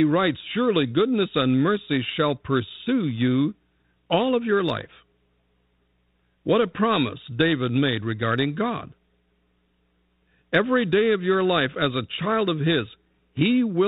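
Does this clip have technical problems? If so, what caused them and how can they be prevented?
No, there's nothing to fix: the speech runs through a G.726 ADPCM link at 32 kbit/s, the standard DECT rate, which caps it at 4 kHz and adds only the light coding noise expected at that setting.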